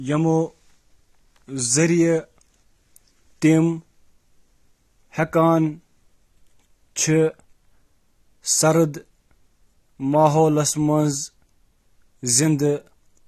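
From start to finish the speech carries AAC compression damage. Nothing sounds above 13.5 kHz. The tone is dull and smeared, and sibilants fizz and warble. The codec likely discarded spectral detail under a tight bit budget, which fits a rate near 32 kbps.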